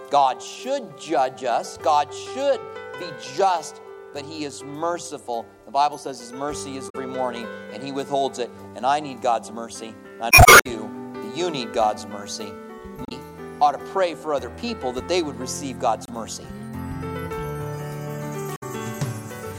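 Damaged data in a compressed stream breaks through at 6.86–6.95, 10.28–10.67, 13.02–13.12, 16.05–16.10 and 18.54–18.63 s. Each time, corrupted frames throw the decoder out of sync, leaving a brief chirp, squawk, click or short hole while it hunts for the next valid frame.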